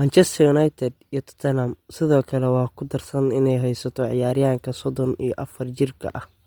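Throughout, the speech sounds breathy and grainy, its upper frequencies replaced by noise. The likely cause is heavy Bluetooth LC3 compression at a low bitrate.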